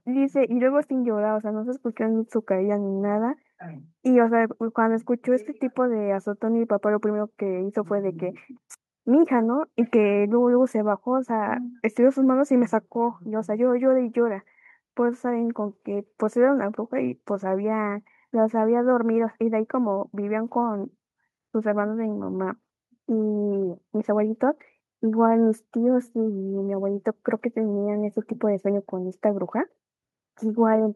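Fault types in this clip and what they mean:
No faults are audible.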